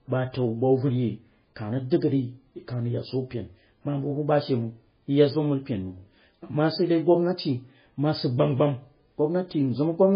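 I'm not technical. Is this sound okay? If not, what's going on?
No. MP3 compression runs throughout the speech, from start to finish, and it is heavy. Everything above about 5 kHz is simply gone, so the voice sounds dull and muffled, with s sounds losing their hiss. The voice takes on a watery, swirly quality, and sharp starts of sounds come out smeared. This is likely an MP3 squeezed very hard: it threw away the treble and many faint details to save space.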